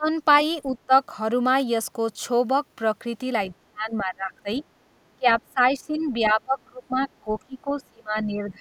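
The echo canceller likely lost track during double talk, unable to tell the near talker from the loudspeaker echo, and turned both down together. The result is speech suppressed in double talk: the voice drops by about 25 dB at 0.0–0.1 s, dips more gently, about 15 dB, at 0.7–0.92 s, then sinks or breaks up in pieces across 3.54–4.49 s and again from 5.19 s to the end, where around three seconds are pushed down.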